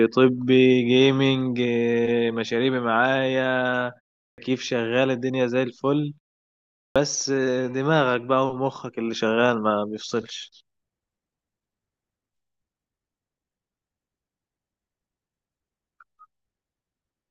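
Clipped start after a pause at 4.30 s and 6.88 s: after gaps of about 0.38 s and 0.76 s, the output path needs time to wake and lock again, so roughly 79 ms and 76 ms of speech are lost, and speech bursts in abruptly without its first sounds.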